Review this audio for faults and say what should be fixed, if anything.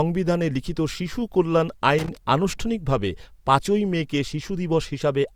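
Loose connector crackle from 1.98 to 2.17 s: a worn or dirty contact intermittently breaks the speech signal, producing an irregular scratchy burst. Clean or replace the connector and secure the cable against movement.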